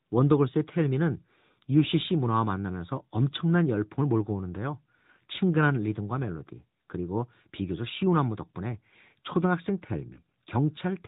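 Throughout, the speech sounds boxy and plainly buzzy, with nothing above 4 kHz. This is the AMR narrowband mobile codec, whose audible damage fits a mid-rate mode of about 10.2 kbps. At 10.14 to 10.21 s, a brief dip or warble is heard, consistent with a single lost AMR speech frame of 20 ms. The decoder bridged the gap by repeating the previous pitch and vocal tract settings at reduced gain.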